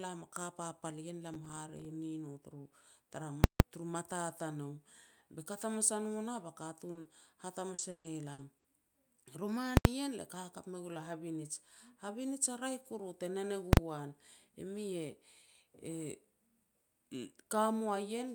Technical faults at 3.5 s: invalid numbers at full scale

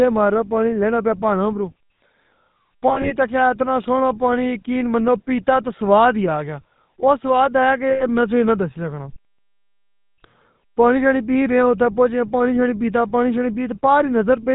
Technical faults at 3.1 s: GSM full-rate codec; lost GSM frames

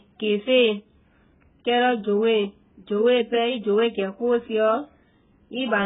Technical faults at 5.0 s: AAC compression

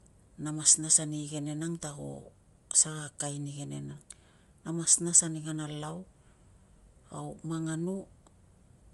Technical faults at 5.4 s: Bluetooth LC3 compression

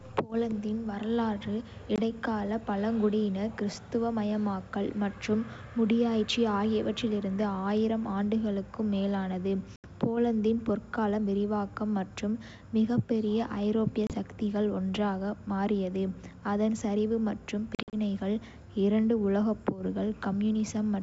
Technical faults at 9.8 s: packet loss on an ADPCM call

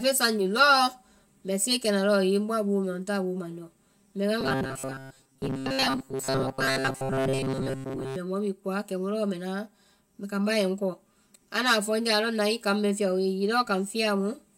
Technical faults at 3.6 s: channel delay (comb filtering)

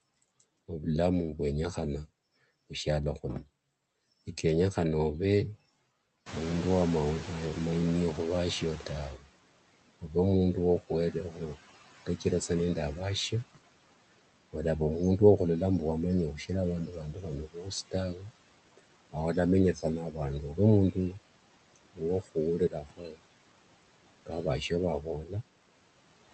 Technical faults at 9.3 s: noise suppressor artifacts; speech cut by the noise suppressor

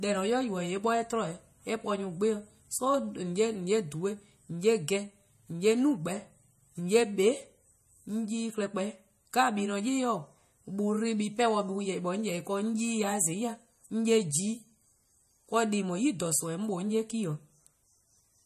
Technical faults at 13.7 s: MP3 compression

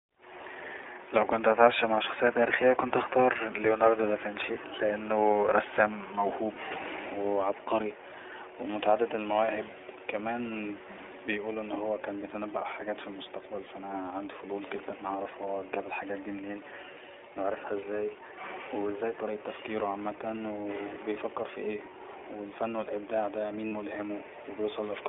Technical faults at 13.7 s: iLBC codec; lost iLBC frames

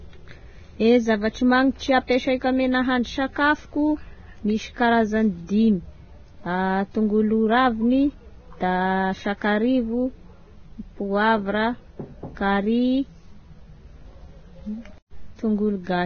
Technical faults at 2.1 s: Vorbis compression; pre-echo

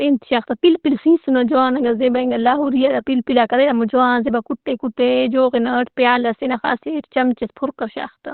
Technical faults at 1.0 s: Opus compression

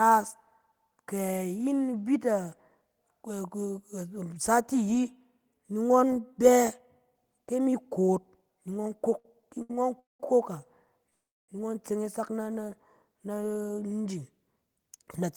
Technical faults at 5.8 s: none

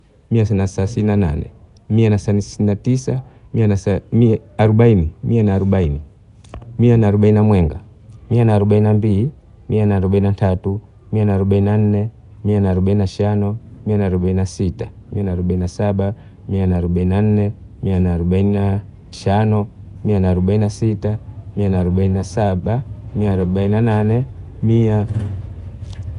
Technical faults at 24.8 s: Nellymoser compression

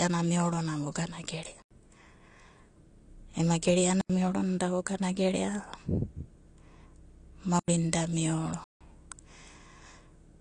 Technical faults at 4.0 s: AAC compression; block of digital silence

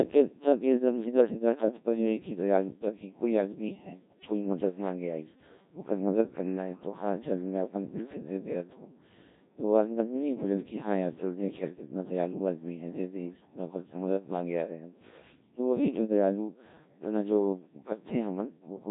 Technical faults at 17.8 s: Codec 2 vocoder

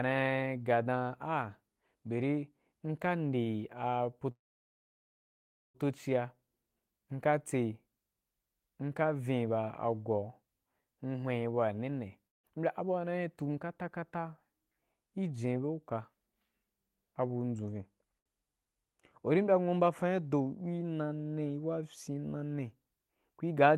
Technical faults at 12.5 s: long network dropout

